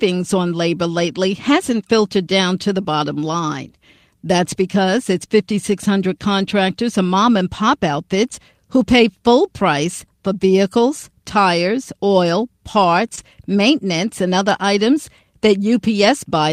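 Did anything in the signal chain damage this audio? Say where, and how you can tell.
Yes. The damage happened on the network path and was patched by the decoder. Just before "maintenance and other items", from 13.15 to 13.19 s, there is a short concealed packet loss. About 20 ms of audio never arrived in time. The receiver covered 18 ms of it by extending the preceding sound, then crossfaded back into real audio. You hear it as a brief smear or wobble where the transition should be clean.

The same spot, 13.17 to 13.19 s, also carries a lost packet rebuilt from error correction. One 20 ms packet went missing. The packet after it held a low-bitrate copy, and the Opus decoder played that copy instead of leaving a gap. So there is no dropout in that slice, but it sounds rougher and noisier than the audio on either side. The texture changes for an instant, then clears as full-quality frames resume.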